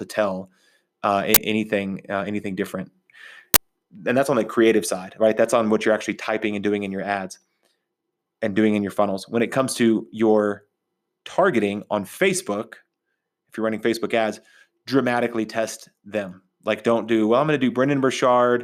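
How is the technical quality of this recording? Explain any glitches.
The recording has two uninitialised buffer faults, at 1.34 to 1.37 s just after "tell uh" and at 3.54 to 3.56 s. Each is a loud crack or burst of digital noise about 21 ms long, which fits a 1024-sample block being played out before any audio was written to it, so stale memory was heard as sound.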